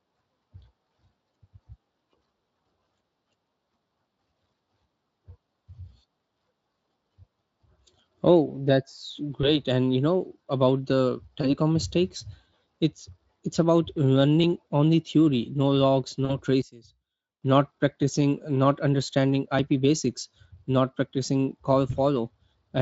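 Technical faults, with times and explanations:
9.41–9.51, 11.41–11.54, 16.25–16.37 and 21.91–21.98 s: VoIP packet loss concealed by the speech codec. The speech is briefly stretched into a buzzy or noisy sound that fades, then recovers slowly. The decoder fills each gap by repeating its last pitch and filter at falling gain. About 20 ms is missing each time, and 40 ms at 16.25 s, which fits one or two lost frames.
14.44 and 19.59 s: dropped buffer (overrun). Each is a small jump forward in the speech, with no silence. A few milliseconds of audio are missing, and the two sides are butted together. This is likely because samples were overwritten before the program read them.
16.62–17.42 s: one channel inverted. The centred speech nearly disappears in mono, falling by about 18 dB and leaving a faint residue. The likely cause is one channel flipped in polarity, so the shared centre cancels when the channels are summed.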